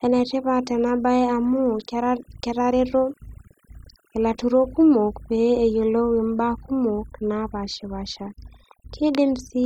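A speech recording that's been hit hard by overdone noise removal, start to finish. The denoiser was clearly set too aggressive: any frequency band sitting close to what it thought was noise got pulled way down or shut off, and the softer parts of the voice went along with it. So the background drops and breaks up into little twinkly specks. On top of that there are two sharp single clicks, at 0.89 s and 6.58 s, each showing as a thin vertical line across the spectrum. They're too brief to take anything audible away; the likely cause is dropped samples, with the waveform jumping ahead across a gap of only a tiny fraction of a millisecond.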